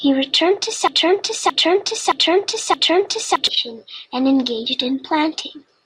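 After "returned to", from 0.88 to 3.47 s, a broken-record loop replays a 0.62 s fragment four identical times, likely a stalled stream. Unlike echo, it never decays.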